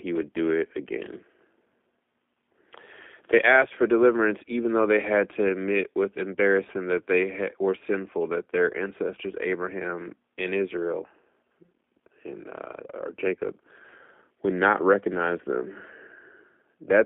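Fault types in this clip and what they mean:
G.729 codec: The speech passes through a low-rate voice codec for the whole clip. It does not carry the waveform itself. It sends a vocal tract filter, a pitch predictor and a few pulses per frame, and the sound is rebuilt from those. Here the damage is plainly audible, with a rough, synthetic edge on every word. The band runs only from about 250 Hz to 3.5 kHz, so it sounds thin. The coarseness fits an 8 kbit/s G.729-type stream.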